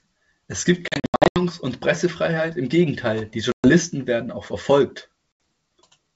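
Packet loss on an ADPCM call at 0.88–1.42 s (scattered hard-edged dropouts), 3.52–3.69 s and 5.39 s: the decoder loses sync with the sender, so speech resumes slightly distorted, then settles.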